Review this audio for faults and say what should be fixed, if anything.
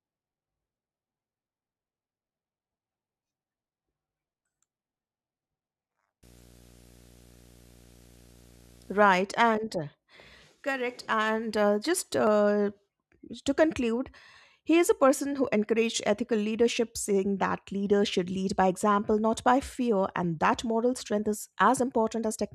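Video or display buzz runs from 6.23 to 9.21 s under the speech: a rasping buzz at 59.94 Hz, the field rate of an NTSC-style picture, with hash above it and a thin whine at 15.7 kHz from the line scan, sitting roughly 25 dB below the speech. A nearby screen or video cable is coupling its scanning signals into the audio wiring. Keep audio cables away from monitors and video leads, and break any shared ground between them.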